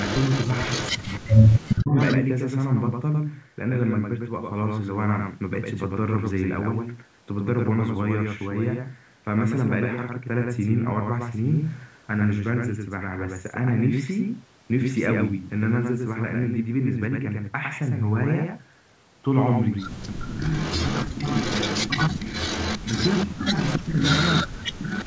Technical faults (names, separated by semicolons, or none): doubled audio track; echo leak; speech suppressed in double talk